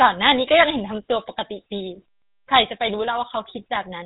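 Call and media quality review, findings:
GSM full-rate codec, whole clip. Buzzy, gravelly roughness on the speech, nothing above 4 kHz. Points to a 13 kbps full-rate coder: vocal-tract filter driven by sparse regular pulses. A plain 4 kHz band-limit would sound dull but smooth, without this grit.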